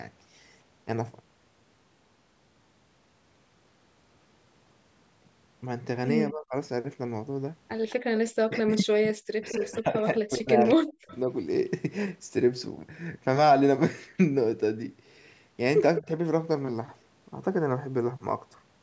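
Between 6.31 and 6.55 s the speech dips by about 25 dB, likely speech suppressed in double talk: the echo canceller, faced with both ends talking, turned down the local talker along with the loudspeaker echo. From 7.89 to 7.95 s a faint echo leak appears, a copy of the far talker delayed by 213 ms at about 25 dB below the speech, likely residual loudspeaker pickup the canceller failed to remove. The worst double-talk suppression runs from 8.45 to 11.13 s, with the speech falling as much as about 40 dB. Within and just after it, the same 213 ms echo leaks through at 8.58–8.77, 9.49–9.71, 10.68–10.74 and 11.08–11.18 s, at about 20 to 30 dB below the speech. A brief dip of about 15 dB follows at 15.99–16.09 s.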